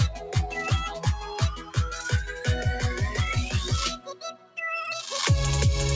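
A speech noise suppressor was left running on this non-speech audio. It treats sustained parts as noise, so the level swings by around 10 dB throughout: onsets come through while held portions and decays sink, giving a pumping, thinned-out quality over the 8 kHz band of the call path.

The noise suppressor cuts sound it misreads as noise at three points: 0.11 to 0.30 s, dipping about 5 dB; 1.55 to 1.77 s, about 10 dB; and 3.97 to 4.58 s, the deepest at about 15 dB.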